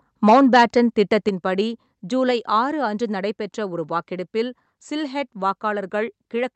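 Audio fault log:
0.27–1.16 s, microphone overload: The loudest syllables in this stretch have a harsh, crackling edge because their peaks are flattened against the converter's ceiling. The signal runs about 5 dB past full scale, and a few percent of samples are clipped. The likely cause is microphone input gain set too high, so the squared-off waveform tops add dense odd harmonics that come through as grit on each peak.
0.3 s and 1.29 s, microphone volume stepped down: The voice and the background fall in level together in two abrupt steps, about 2 dB at 0.3 s and about 5 dB at 1.29 s. There is no gradual fade. Each step is a single gain change, and the second, larger one comes just after the clipped passage ends. The likely cause is the call software detecting an overdriven microphone and reducing the device's input volume in discrete increments.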